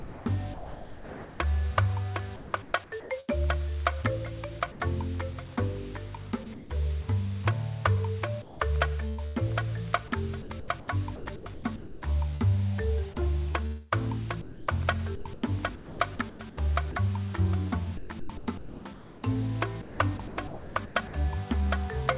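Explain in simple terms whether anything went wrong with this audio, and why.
Yes, two related problems. Sound chopped by the voice detector happens at 0.0–1.4, 2.36–3.3, 6.44–6.70, 8.42–12.42, 13.52–16.95 and 17.97–21.13 s. The sender's detector likely kept switching on and off, so parts of the sound flicker in and out with a soft artificial hiss between them.

Sound dropped by the voice detector happens once, at 4.72–4.80 s. Here the sound likely stopped being sent for a brief moment and a steady hiss filled the gap. It is a single short hole that then recovers, not the repeated on-off flicker of the chopped stretches.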